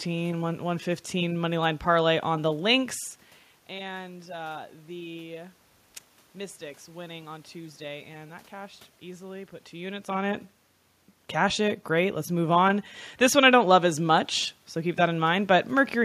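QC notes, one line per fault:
Nothing stood out on listening to the speech.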